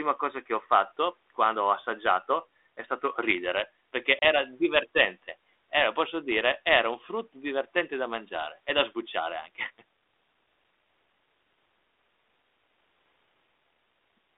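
At 4.19 s, after "è stato ridere perché", packet loss on an ADPCM call cuts a hard-edged 30 ms blank stripe; the desynchronised decoder resumes slightly distorted, settling by 4.25 s.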